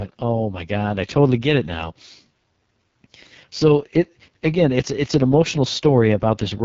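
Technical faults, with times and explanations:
Throughout: AMR wideband (HD Voice) codec. The speech has a rough, raspy, buzzy texture, and nothing sits above about 7.5 kHz. The damage is heavy enough to suggest the codec's lowest mode, around 6.6 kbit/s. At that rate the pulse excitation driving the vocal-tract model is coded too coarsely to follow the real waveform, so voiced sounds turn grainy. The top band is filled with shaped noise rather than actual detail.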